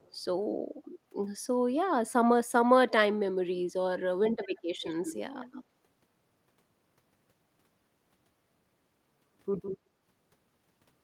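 At 0.00 to 0.11 s a faint echo leak appears, a very quiet copy of the speech about 200 ms late. It returns more strongly at 4.43 to 4.62, 4.81 to 5.21, 5.41 to 5.64 and 9.62 to 9.77 s, now 160 ms behind and only some 15 to 25 dB down. This is likely a far-end loudspeaker echo the canceller missed. On a spectrogram, faint duplicate harmonic streaks trail the speech by that offset.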